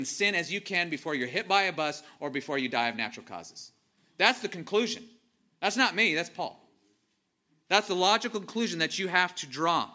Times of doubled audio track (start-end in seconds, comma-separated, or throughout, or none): none